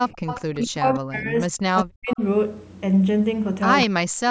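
From 0.09 to 0.59 s, a faint copy of the speech trails it by 198 ms, about 15 dB quieter. This is echo leak. The far side's echo canceller likely let some loudspeaker sound back into its microphone.

From 0.56 to 2.21 s comes speech suppressed in double talk. The voice drops in pieces, by up to about 40 dB, for roughly one and a half seconds. The canceller likely mistook overlapping talk for echo and turned it down.

Brief echo scraps return at 0.95 to 0.99 s (very faint, about 40 dB down), 2.09 to 2.16 s and 3.82 to 3.86 s. Each carries the same 198 ms delay.

From 3.86 to 4.29 s the speech is suppressed again, dipping up to about 40 dB.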